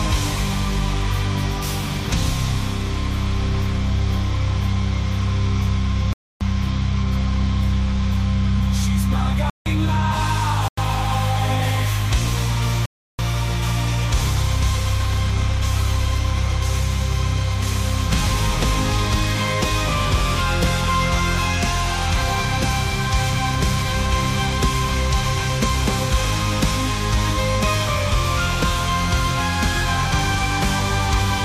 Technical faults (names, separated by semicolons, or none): block of digital silence